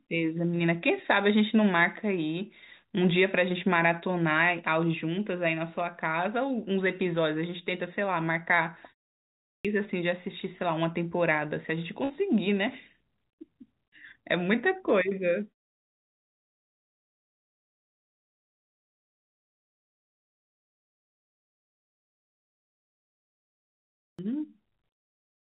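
At 9.2 s the sound comes back after a short pause of about a third of a second and the opening is simply gone. Roughly 0.45 s is swallowed, so the speech jumps in abruptly without its first sounds. That's a clipped start after a pause: the output device dropped into a low-power state during the silence and needed time to wake and lock again before it could play anything.

Just after, at 12.04 s, there's a burst of packet loss. For about 52 ms the receiver keeps extending the last bit of audio and turns it down as it goes, giving a short held buzz or fading hiss. The speech then picks up further along, with about 60 ms of real audio skipped over.

At 23.74 s the clipped start happens again, this time after a much longer pause of about 8.3 s. Another roughly 0.45 s disappears at the onset, and the speech begins mid-sound just like the first time. Both losses are the same length, which points to the device taking the same wake-up time each time. 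Across the clip there's nothing above 4 kHz, which fits a narrowband call codec like G.711.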